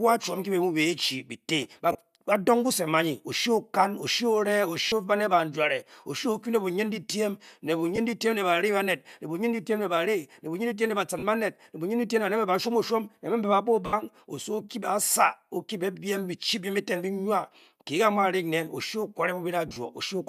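Lost LE Audio frames interrupt the speech six times: at 1.92 s for 30 ms, 4.88 s for 40 ms, 7.96 s for 20 ms, 11.19 s for 40 ms, 13.86 s for 70 ms, and 19.68 s, scattered over 80 ms. The decoder fills each gap by repeating the last spectrum with scrambled phase. The sound smears into brief noisy hiss. The 70 ms gap fades. Gap lengths fit 10 ms frames, likely from light LC3 compression.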